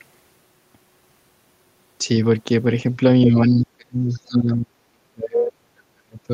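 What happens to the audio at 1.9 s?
Nothing goes wrong at 1.9 s; the speech there is intact, with no dropout, click, distortion or other fault.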